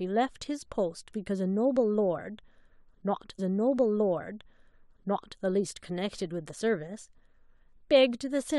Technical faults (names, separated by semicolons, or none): stream segment repeated